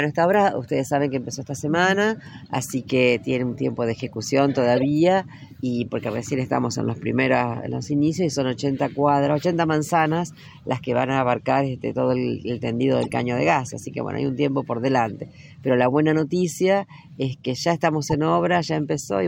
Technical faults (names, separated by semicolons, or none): corrupt frame decoded